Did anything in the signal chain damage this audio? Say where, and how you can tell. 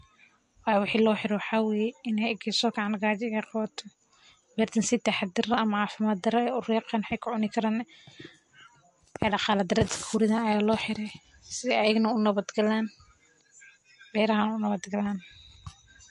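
Yes, at the codec stage, throughout the speech. Nothing survives above 11.3 kHz, and swirly, watery artefacts are plainly audible. This is likely MP3 compression at a low bitrate, around 48 kbps.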